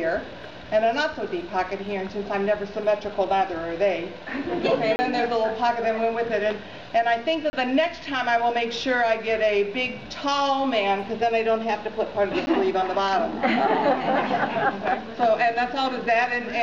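Output buffers likely went unfilled, leaving blocks of digital silence: 30 ms holes at 4.96 s and 7.50 s, and a 10 ms dropout at 12.46 s.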